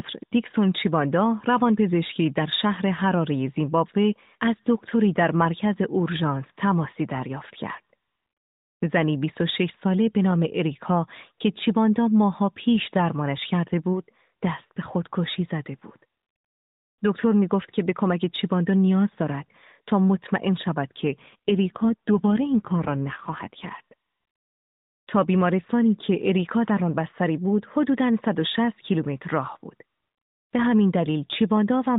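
From 21.08 to 23.79 s there's an AMR rate drop. The speech gets rougher and more synthetic, with no gap and no change in bandwidth. That fits the codec stepping down from its normal 12.2 kbps narrowband mode to about 5.9 kbps, then recovering.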